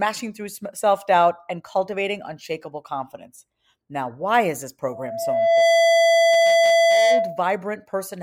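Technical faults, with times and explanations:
4.91–7.47 s loudspeaker feedback squeal: after "why is this", a 670 Hz tone swells within a second to about 5 dB above the speech, because microphone-to-loudspeaker loop gain exceeds one there.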